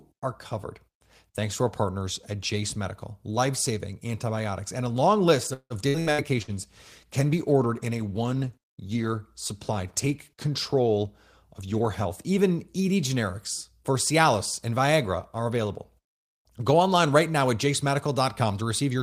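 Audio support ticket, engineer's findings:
Repeated packet loss (robotic sound), 5.53 to 6.51 s, just after "and a long list": choppy fill over several gaps, longest 168 ms, about 41% concealed. Pieces are missing, unlike bitrate roughness.

Call bitrate drop, 6.38 to 12.17 s: steady muffled, watery coding with treble cut, fitting encoder rate falling from about 32 to 18 kbps. Continuous, with no holes, unlike loss.

Jitter buffer speed-up, 10.74 to 11.07 s (114%) and 11.62 to 12.50 s (110%): hurried delivery, about 50 ms then about a tenth of a second trimmed. Pitch is unchanged, unlike clock drift or resampling.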